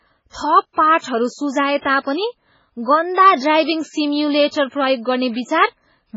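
Across the whole clip the speech sounds watery and swirly, with a dull top end where nothing reaches above 7.6 kHz and the s sounds turning into metallic chirps. This is heavy MP3 compression, likely at a very low rate; the damage fits something near 16 kbps. Starved of bits, the encoder chops off the treble at a fixed point and drops weaker frequency lines, which then flicker on and off between frames and give that unstable, underwater texture.

Pre-echo appears as a short hiss just before sharp onsets at 0.30, 0.98, 1.81, 4.48 and 4.67 s, lasting about 50, 55, 38, 58 and 50 ms, with each attack sounding softened and smeared. The codec spreads quantisation noise across an entire block, so when a loud transient lands late in that block, noise scaled to the transient leaks into the quiet moment before it and is heard ahead of the onset.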